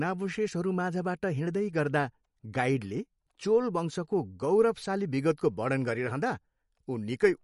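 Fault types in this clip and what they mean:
MP3 compression: The speech has no content above 11.2 kHz anywhere in the clip. That hard ceiling comes from an encoder dropping the treble to save bits. The damage is plainly audible throughout. Weak frequency detail is thrown away and returns unevenly from frame to frame. The sound points to a low bitrate, which fits roughly 48 kbps. The likely cause is lossy MP3 encoding squeezed too hard for this material.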